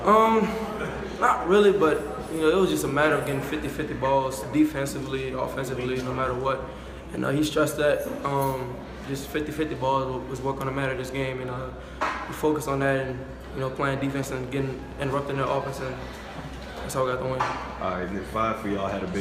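From 14.24 s to 19.15 s there's a train of clicks, around fifty near-identical pops at roughly 11.2 per second, unevenly spaced and about as loud as the sound itself. It ticks right through the pauses too, likely interference from nearby gear or a faulty connection or power supply.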